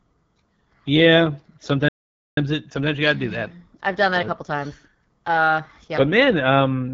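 A speech recording carried throughout by the AMR wideband (HD Voice) codec at a low rate, with plainly audible coding damage: the voice has a rough, raspy texture, and nothing is present above 7 kHz. The roughness is typical of the pulse-excited vocal tract model starved of bits, which points to one of the lowest AMR-WB modes, consistent with 8.85 kbit/s. The top band above 6.4 kHz is synthetic shaped noise rather than coded detail. A playback stall occurs from 1.88 s to 2.37 s, where the audio stops dead mid-flow for about 0.49 s before resuming. That length of silence likely comes from the player running out of buffered data or having its output thread blocked until it recovered.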